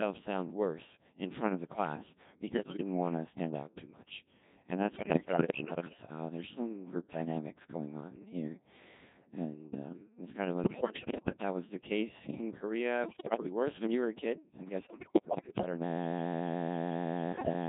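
The whole speech clip passes through the Codec 2 vocoder, heavily degraded. The low rate, consistent with 1.6 kbit/s, carries only pitch, voicing, level and a coarse spectral envelope, and the decoder rebuilds the voice from sine waves, so it sounds buzzy and robotic.

Bit errors on digital voice radio hit at 2.49–2.81 s (after "front of the class", before "want to stand out"), 4.96–6.02 s, 10.64–11.38 s (after "um it's kind of", before "that was the case"), 13.04–13.46 s, 14.80–15.66 s (after "were a kid I'm") and 17.32–17.53 s. Roughly 7 to 15 percent of the bits are flipped, which corrupts the frame parameters and produces sudden pitch, level and timbre jumps, bleeps and warbling gibberish.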